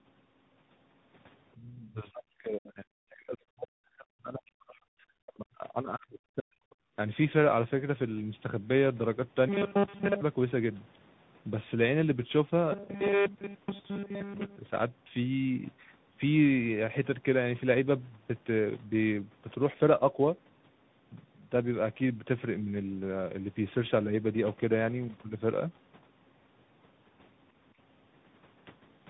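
Throughout, the speech passes through tandem speech coding, re-encoded at each link in a chain ending in CVSD, so it sounds rough, warbly and muffled, with nothing above 3.8 kHz.

From 1.93 to 4.85 s, speech suppressed in double talk likely comes from the echo canceller clamping down, pushing the speech down by around 40 dB in places.

At 6.7 s, for about 50 ms, the other side's voice leaks through, likely uncancelled loudspeaker echo, heard as a faint scrap far below the speech.

From 9.49 to 10.21 s and 12.72 to 14.58 s, robotic sound from repeated short buffers, likely caused by late audio, repeats most of the signal. This imposes a rigid 200 Hz metallic buzz, which fits a 5 ms buffer.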